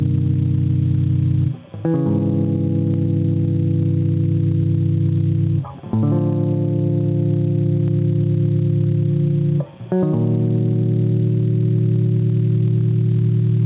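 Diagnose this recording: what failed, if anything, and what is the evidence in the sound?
The input gain is set far too high for the microphone, and a fast limiter or compressor in the call processing keeps hauling it back down. That is the likely cause of the gain pumping heard through the whole music clip. Every loud passage pulls the level down by something like 15 dB, so loud and quiet parts sit squashed together. All of it is carried inside the call path's band, which stops at 4 kHz.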